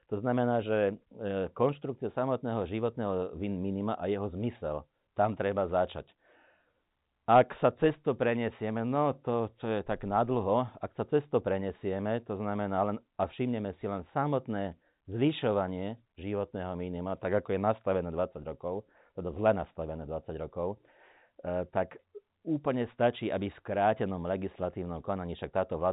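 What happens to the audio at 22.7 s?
Nothing goes wrong at 22.7 s: the speech carries straight through that moment with no dropout, click or distortion, keeping the same narrow telephone band, with nothing above about 3.8 kHz, that it has on either side.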